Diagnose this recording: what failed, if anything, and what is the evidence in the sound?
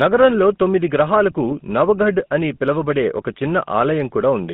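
The codec stage failed: the whole speech recording carries GSM full-rate codec damage, plainly audible from start to finish. The sound is confined to a telephone band of roughly 150 Hz to 3.6 kHz, with a buzzy, gravelly roughness that fits the 13 kbps GSM full-rate codec. It models the vocal tract and drives it with a sparse, regularly spaced pulse excitation. On a spectrogram, energy stops at a flat ceiling near 3.6 kHz, with grainy, smeared harmonics beneath.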